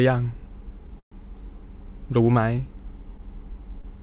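A call audio freeze runs from 1.00 to 1.14 s. The packets were likely held up in transit, so the jitter buffer ran dry and the receiver had to fill about 120 ms on its own. It extends the last sound briefly as a fading buzz or hiss, then roughly 100 ms of silence follows. When the stream resumes it picks up exactly where it stopped, so nothing is lost. The sound is simply pushed later by a gap.

A short stall from a late packet occurs between 3.81 and 3.85 s. One packet had not arrived when it was due, and the jitter buffer emptied again. The receiver stretched the last sound by about 21 ms until the packet landed, then continued from the same point. No audio is missing, but that moment is held slightly too long, with a faint buzz or dip. The call path has a band limit, with nothing above 4 kHz (consistent with 64 kbps G.711 mu-law).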